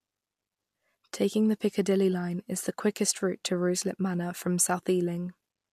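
A short speech recording with no technical faults to report. Nothing in the audio points to a problem in how it was captured, processed or delivered.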